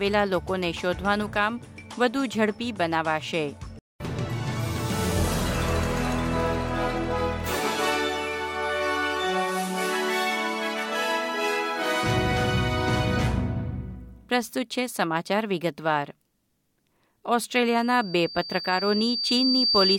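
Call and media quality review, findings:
Loudspeaker feedback squeal, 17.67 s to end of clip. Single tone near 4.6 kHz swells over about two seconds, peaking about 5 dB above program. Mic hears speaker, loop gain exceeds one.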